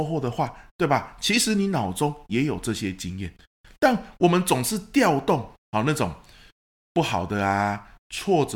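No technical faults can be heard anywhere in the speech recording.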